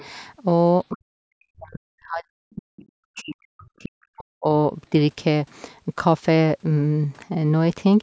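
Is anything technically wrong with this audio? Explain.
Yes. Other side's voice leaking through appears at 0.00 to 0.06 s and 2.76 to 2.88 s. It's a faint second voice, roughly 25 dB under the speech, likely residual loudspeaker echo.

Speech suppressed in double talk occurs from 0.92 to 2.70 s and 3.14 to 4.49 s. The speech drops sharply, by up to around 40 dB, likely because the echo canceller muted both overlapping talkers.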